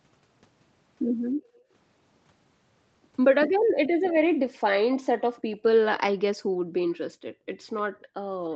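Background gated by the echo canceller cuts the room sound from 1.33 to 1.71 s (about 19 dB down), then from 3.54 to 4.03 s and from 5.11 to 5.58 s (about 40 dB). Each dip appears as a dark gap in the spectrogram's noise floor and a flattened waveform trace. Within the 5.11 s gap, a faint delayed copy of the speech appears from 5.37 to 5.55 s, trailing by 295 ms and showing as smeared, repeated energy. This is likely an echo leak from the far end's loudspeaker. The gating returns at 6.39 s and holds to the end of the clip, about 40 dB down. A second, slightly stronger echo scrap appears inside it from 7.78 to 8.05 s.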